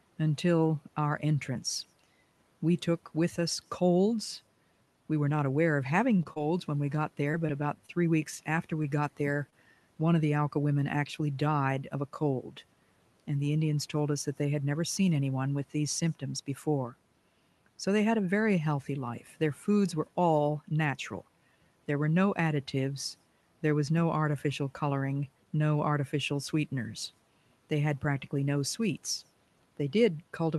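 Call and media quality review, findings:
Scattered short gaps, 6.17 to 9.55 s, between "not aware of having" and "one of the". Around seven small dropouts, none longer than about 30 ms, so brief ticks and smeared hiccups. Probably the jitter buffer and packet loss concealment: lost or late packets, each hole filled by stretching the last bit of sound, roughly 5% of that stretch patched. The low room noise and the top end rolling off near 12 kHz come through as-is.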